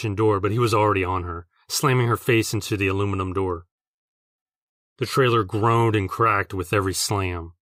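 Nothing here jumps out as a technical fault; the speech runs along without any dropouts, glitches or other problems catching the ear.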